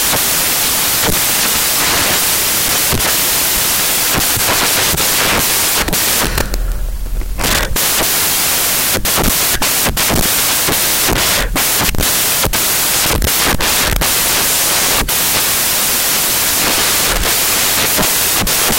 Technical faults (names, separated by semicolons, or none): samples built from the wrong bytes